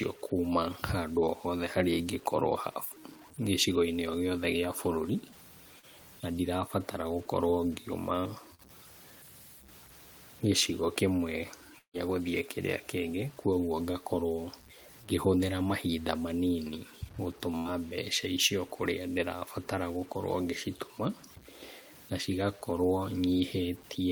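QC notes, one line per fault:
Throughout: low bit depth without dither. Grainy distortion rides on the speech and shifts with it, quiet passages turning gritty and the softest tails sputtering. Likely a 7-bit truncation without dither, so the error tracks the signal at about -25 dB relative to it.
5.79 s and 8.55 s: short concealed packet loss. Each is a brief smear of roughly 40 ms where audio failed to arrive; the receiver extended the preceding sound for about 33 to 37 ms, then blended back into the real signal.
11.78 to 11.97 s: long network dropout. About 160 ms of speech is missing. The last sound is carried on as a fading buzz for around 150 ms, then near-silence sets in until the audio resumes, likely from a network stall.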